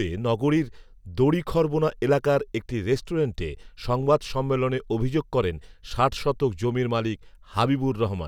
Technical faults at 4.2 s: none

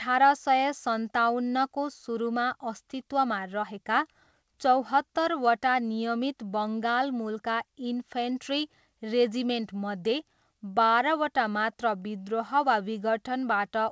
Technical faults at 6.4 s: none

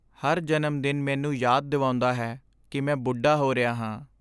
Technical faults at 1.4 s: none

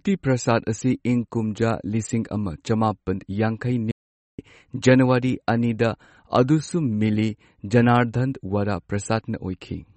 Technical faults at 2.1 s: MP3 compression

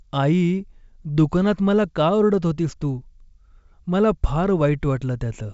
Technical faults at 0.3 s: none

